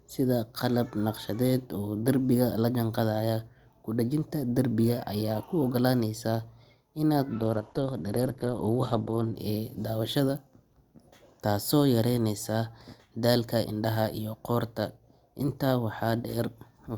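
Adaptive stream at a lower bitrate, from 7.36 to 9.36 s in this speech clip: the treble drops abruptly, with nothing above 12.2 kHz and thicker codec artefacts, then recovers just before "ee daawashada". No gap occurs. This points to the stream briefly switching from about 64 to 16 kbit/s Opus.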